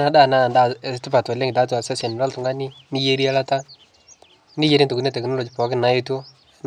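No technical faults can be heard anywhere in the recording, and the signal stays steady and intact throughout.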